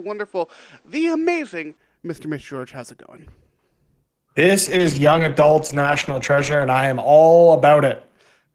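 From the start to 1.77 s, the input was likely switched to a poorer device. Its narrower band leaves nothing above 8.8 kHz, so the speech sounds duller and boxier, with a faint new noise floor well below the speech. The switch itself brings no gap and no obvious jump in level.

From 4.67 to 6.71 s, a call bitrate drop starves the encoder of bits for about two seconds, which fits a fall from 32 to 10 kbps. The coarser coding leaves the speech rough, watery and muffled until it recovers just before "I am all".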